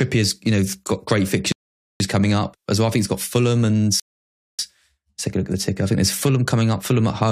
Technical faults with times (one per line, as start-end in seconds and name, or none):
1.52-2.00 rebuffering stall
4.00-4.59 rebuffering stall